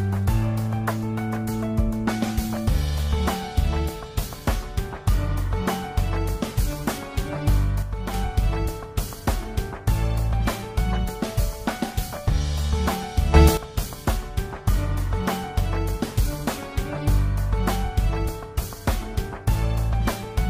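At 7.83 s the level drops by about 6 dB, then recovers at 8.14 s. At 13.34 s it jumps up by about 12 dB until 13.57 s. Sound and background noise move together. Each is a sudden gain jump, likely a digital gain change applied without a ramp.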